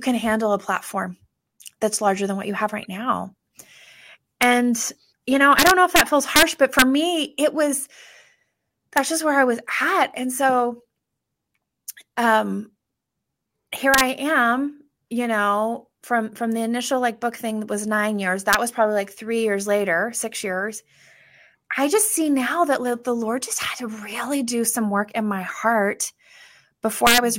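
Integer overflow cracks hit the loud speech peaks at 4.43 s, 5.59–6.01 s after "you know", 6.36–6.43 s, 6.79–6.82 s before "me it was", 8.97 s, 13.94–14.01 s, 18.53 s before "was probably like", and 27.07–27.18 s. Peaks running up to about 5 dB past the integer limit wrap to the opposite sign. The result is violent cracks, harsher than clipping.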